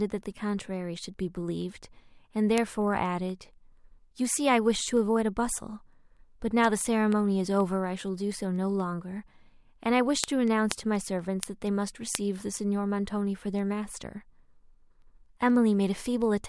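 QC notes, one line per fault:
0.18–16.46 s: word clock ticks. Sharp clicks of uneven strength recur steadily about five times a second, roughly seventy across the speech. The receiver runs unlocked, its clock off by around 200 ppm, so each slip drops or repeats one sample.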